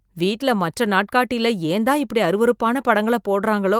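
Speech, with nothing technically wrong to report.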